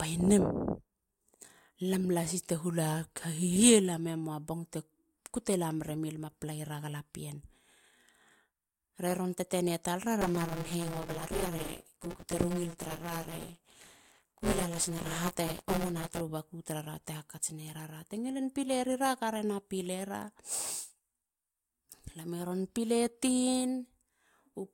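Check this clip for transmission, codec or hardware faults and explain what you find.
One hardware-path fault is present: buffer tearing from 10.21 to 16.21 s, ending just before "baku tarara te". The writer and reader of the playback ring buffer had slipped out of step, so each buffer period held a little under half its length of speech from about 20 ms earlier, joined hard at both edges. That repeating splice puts a robotic 172 Hz buzz over the speech, which fits a 256-sample buffer.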